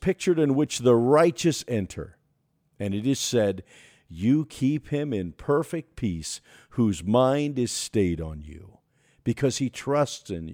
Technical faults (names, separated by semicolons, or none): sample clock jitter